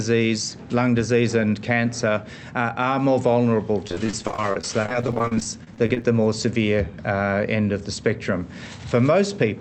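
From 3.87 s to 6.05 s the audio breaks up with repeated packet loss, giving a robotic sound. Over those two seconds the stream drops out roughly forty times, each hole no longer than about 34 ms. The receiver fills each gap by stretching the last received sound, so about a quarter of the stretch is synthetic fill. This makes the passage choppy, with short pieces missing. Through the call path, the top end stops near 8 kHz.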